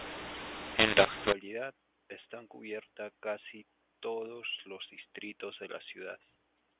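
It's a speech recording over telephone-band coding, and for the first 1.32 seconds you get a mu-law and A-law mix-up: samples coded as mu-law are decoded as A-law, so levels scramble, quiet stretches turn into noise, and the speech comes out harsh and gritty until it settles after that.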